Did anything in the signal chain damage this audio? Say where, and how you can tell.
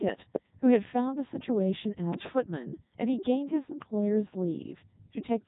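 Yes. The damage is at the codec stage, and it runs through the whole clip. This is Codec 2 vocoder damage. The speech sounds robotic and buzzy from start to finish. Nothing is heard above 3.8 kHz. Codec 2 keeps no waveform. It sends only pitch, voicing, energy and a spectral envelope, and the decoder rebuilds the voice from sine waves. The heavy damage comes from its top 3.2 kbit/s mode.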